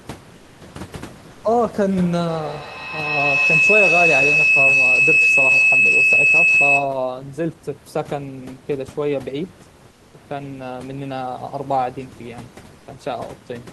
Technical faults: comfort noise in place of the background; feedback howl

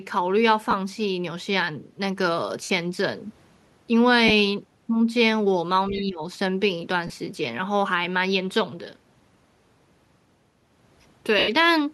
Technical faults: lost LE Audio frames; other side's voice leaking through; speech suppressed in double talk

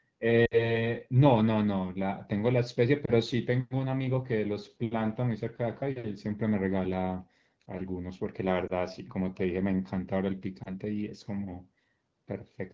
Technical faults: lost AMR speech frames

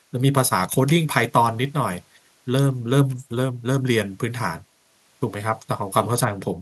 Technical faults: none

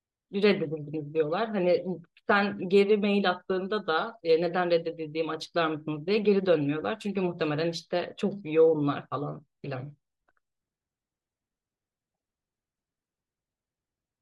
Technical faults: broken MP3 bit reservoir

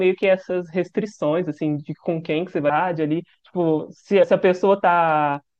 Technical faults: damaged data in a compressed stream

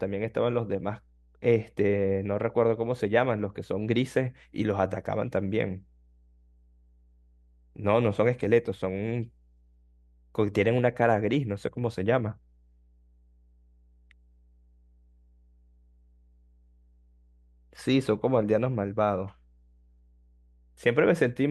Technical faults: mains hum

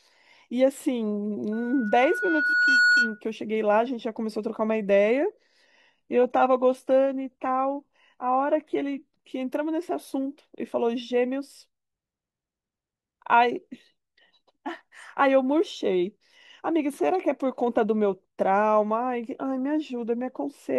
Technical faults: loudspeaker feedback squeal; adaptive stream at a lower bitrate

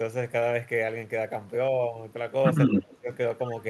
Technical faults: speech suppressed in double talk; echo leak

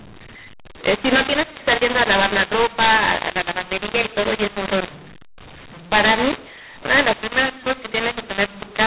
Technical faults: mu-law and A-law mixed up

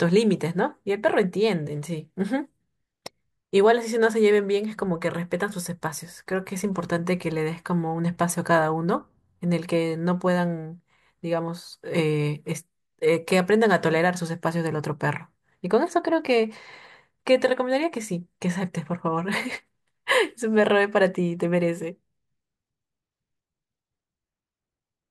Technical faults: none

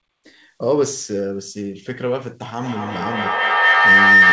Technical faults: feedback howl

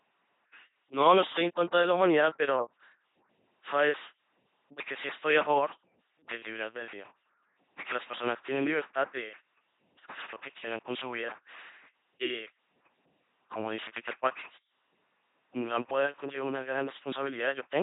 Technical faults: LPC-10 vocoder

